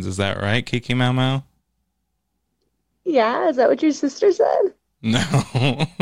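No technical faults can be heard anywhere in this speech recording.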